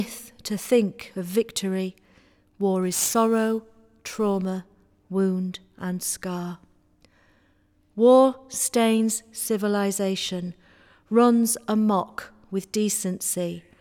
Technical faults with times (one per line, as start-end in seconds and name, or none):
2.82-4.46 crude rate conversion